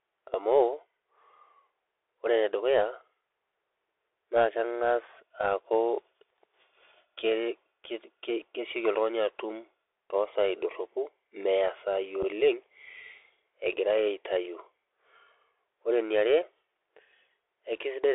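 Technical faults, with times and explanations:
Throughout: Bluetooth CVSD headset codec. The speech runs through the narrowband headset link, which passes only about 300 Hz to 3.6 kHz, so everything above is gone and the sound is boxy and telephone-like. The delta modulator sends one bit per sample, up or down, with an adapting step. Where loud, bright sounds move faster than that step can follow, they distort, sibilants turn scratchy, and a grainy hiss sits beneath the speech. The damage is plainly audible.
12.23 s: unconcealed Bluetooth headset packet loss. About 7.5 ms of audio drops out in a single short hole, consistent with one lost voice packet between headset and phone. Nothing fills the gap with a guess at the missing sound, so it cuts in and out abruptly. On a CVSD link the adaptive step also has to rebuild afterwards, so the speech returns quieter for a moment.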